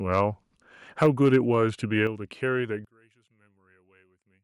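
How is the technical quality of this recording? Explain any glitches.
The recording has three problems: clipping early on, two sudden drops in level, and a near-total loss of the voice in the last part when played in mono.

From 1.02 to 1.37 s, the microphone input was likely set too high, causing microphone overload. Peaks run about 3 dB past the converter's ceiling, and a few percent of samples are flattened at the converter's limit. Their squared-off tops add a harsh, crackling edge to the loudest part of the speech in that stretch, a distortion no later processing can remove.

The microphone volume stepped down twice, at 1.06 s by about 3 dB and at 2.07 s by about 6 dB. The call software likely reacted to the overload by cutting the device's input gain in single jumps. Voice and background noise fall together at each point, an abrupt change that sounds like someone suddenly moved away from the microphone. 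The first drop lands right inside the distorted peak.

From 2.85 s to the end, one channel likely had its polarity inverted. When the two channels are summed to mono, the identical centred voice cancels, and the level falls by about 31 dB. Only the small difference between the channels remains, so the voice becomes a faint remnant that is barely audible.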